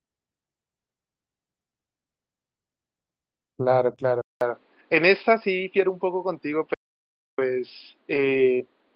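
Speech carried over an Opus call link at around 32 kbps, and it picks up a handful of faults along the way. First is a lost packet rebuilt from error correction at 3.91 s: one 20 ms stretch was replayed from the low-bitrate backup copy carried in the next packet, so there's no hole, just a brief patch that sounds grainier and noisier than the audio around it. The same thing happens at 5.61 s, another 20 ms patch. Then there's a longer run between 8.13 and 8.39 s, where about 140 ms in total comes from those rough backup copies, which fits several separate packets going missing. Right after the first patch there's a short concealed packet loss at 3.95 to 3.99 s. About 20 ms never arrived in time, and the decoder covered it by stretching out the last bit of sound for roughly 15 ms before blending back into real audio, so you get a tiny smear or wobble. At 4.21 s the sound goes silent for about 200 ms and comes back audibly duller and boxier, with nothing above 5.1 kHz from there to the end. 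A faint new background noise sits well below the speech, and loudness stays about the same. That's most likely an input switched to a poorer device, like a different mic or a headset dropping into its call profile. Finally, from 6.74 to 7.38 s there's an audio dropout to silence lasting about 0.64 s. It's silent with no room tone, so whatever was said in that gap is simply gone, likely from the input disconnecting or getting muted for a moment.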